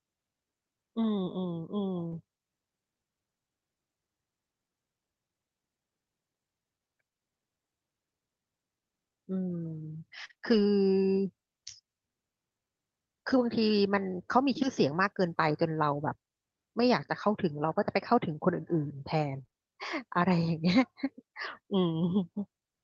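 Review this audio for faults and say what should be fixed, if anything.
Between 2.07 and 2.13 s, about 40 ms of short concealed packet loss occurred: packets arrived too late, so the decoder extended the preceding sound, leaving a brief smear.

A lost packet was rebuilt from error correction at 2.11 s, 13.28–13.34 s (two packets), 15.48 s and 20.72 s. The decoder played the low-bitrate Opus copies carried in the following packets, so there are no gaps, just short rough, noisier moments.

Repeated packet loss, heard as a robotic sound, runs from 10.25 to 10.60 s. Three gaps totalling about 80 ms (longest 39 ms) were patched by continuation, and around a tenth of a second more was rebuilt from error correction, leaving choppy fragments with pieces missing. The same fault recurs from 19.42 to 19.54 s, where three gaps totalling 60 ms (longest 22 ms) fill half that stretch with concealment.

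All of this passed through the Opus call path at 32 kbps, whose 8 kHz audio bandwidth bounds the top end throughout.

To prevent it, fix the network loss and jitter on this link, for example with a wired connection, QoS prioritisation or a deeper jitter buffer, so fewer packets need concealment or rebuilding.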